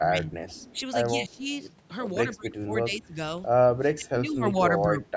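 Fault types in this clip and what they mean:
Speech suppressed in double talk: the level dips by up to about 20 dB in patches, likely echo-canceller ducking, seen as waveform troughs and faded spectrogram energy.
Echo leak: a quiet copy of the speech returns 155 ms late, about 30 dB down, likely loudspeaker pickup the canceller missed, visible as a faint spectrogram ghost.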